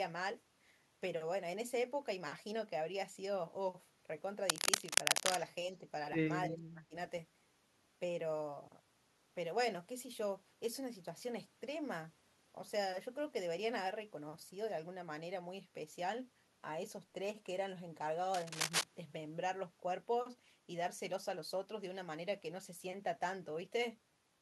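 A speech recording with contact noise in two places and two brief echo-canceller failures. Cable scratch noise appears from 4.49 to 5.36 s and again from 18.34 to 18.84 s. Each time, dense, ragged bursts of scratching rustle over the speech. The first stretch sits a few dB above the speech. The second is about as loud as it. The likely cause is a worn cable or connector being moved, its contact resistance jumping around and injecting noise.

An echo leak follows from 5.73 to 5.77 s. It is a tiny scrap of delayed speech trailing the original by about 314 ms. It is very faint, roughly 40 dB below the talker. This is likely sound from a far-end loudspeaker that the echo canceller failed to remove and sent back.

Then comes speech suppressed in double talk, from 6.50 to 6.95 s. The talker's level sags and partly drops out, falling by around 25 dB at its deepest. About 0.4 s of speech is affected in total. 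Both sides were likely talking at once. The echo canceller could not separate its own talker from the loudspeaker echo and turned both down.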